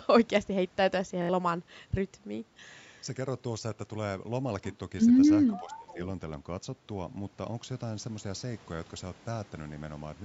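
At 1.22 to 1.29 s there is a Bluetooth stutter. About 70 ms of audio goes missing, which fits roughly three lost packets. The receiver replays its last buffer in a short repeating stutter, and then the speech picks up later, as if it had kept playing.

From 5.48 to 5.94 s a quieter delayed copy of speech sits under the main signal, trailing by about 470 ms and around 20 dB down. This is likely an echo leak: a loudspeaker on one end was picked up by its microphone and not fully cancelled.

Overlapping that, from 5.50 to 5.99 s, the speech dips by up to about 20 dB across roughly 400 ms in total. The likely cause is speech suppressed in double talk: the echo canceller could not separate the local talker from the loudspeaker echo and attenuated both.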